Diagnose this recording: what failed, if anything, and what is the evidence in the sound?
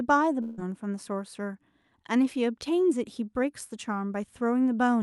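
Network: from 0.41 to 0.59 s the sound smears into a fading buzz, then returns with 160 ms lost, likely a long network dropout being concealed.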